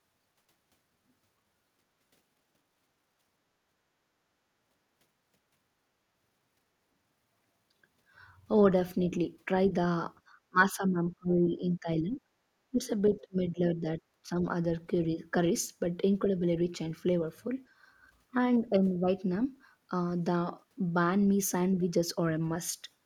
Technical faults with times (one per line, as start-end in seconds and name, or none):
10.49-12.20 speech suppressed in double talk
12.71-12.80 speech suppressed in double talk
13.14-13.20 other side's voice leaking through
13.17-14.46 speech suppressed in double talk
16.36-16.43 speech suppressed in double talk